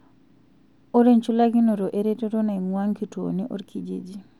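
Nothing in this bit of speech stands out as a technical fault; there's simply nothing to flag here.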